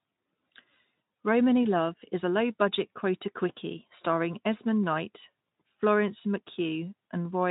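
Nothing here stands out as a technical problem; the speech comes across the Speex link the way you'd expect it to.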